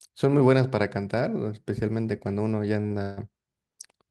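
At about 2.81 s and again right after at 2.86 s, the speech hits two short stalls from a late packet, back to back. Each time the next chunk wasn't there when due, the jitter buffer ran dry, and the receiver stretched the last bit of sound to cover roughly 29 ms and then 38 ms. Nothing gets dropped; the audio just picks up where it left off, but that syllable hangs on slightly too long with a faint buzzy smear.

A moment later, from 3.02 s to 3.19 s, there's a longer call audio freeze. For about 151 ms the sound doesn't move on. The last fragment gets drawn out into a fading buzz rather than dropping to silence, and then the speech carries on from the same spot with nothing lost, just later than it should be. That pattern is likely packets held up in transit and the jitter buffer emptying out.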